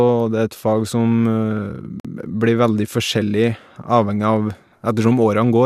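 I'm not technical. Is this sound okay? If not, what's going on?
No. Separately encoded pieces were joined untrimmed, a gap at a join of encoded pieces, leaving a 48-millisecond gap from 2.00 to 2.05 s.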